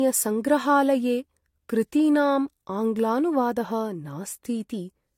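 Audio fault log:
Throughout: transcoding between lossy codecs. The speech carries two layers of compression artefacts at once. The different coding artefacts are heard together. Nothing is present above 16.5 kHz. The likely cause is a chain of two lossy encoders. The sound points to Vorbis at about 66 kbit/s followed by AAC-LC at about 48 kbit/s. The second encoder spent its limited bits re-coding the first one's damage and then added its own.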